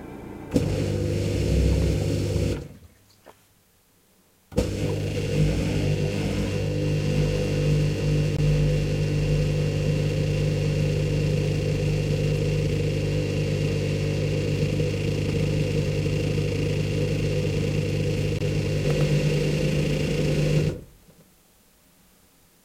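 Gaps between chunks occur at 8.37 s and 18.39 s: hard-edged 20 ms holes spaced 10 s apart, where chunked playback or storage inserts silence at each join. From 18.85 s to the end, a doubled audio track appears: an equally loud, dry copy trailing by about 100 ms, likely from a second, slower capture path.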